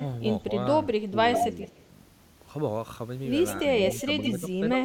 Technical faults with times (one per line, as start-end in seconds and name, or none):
1.06-1.16 speech suppressed in double talk
1.33-1.80 echo leak
1.69-1.77 speech suppressed in double talk
3.90-4.31 echo leak
4.04-4.10 speech suppressed in double talk
4.73-4.83 speech suppressed in double talk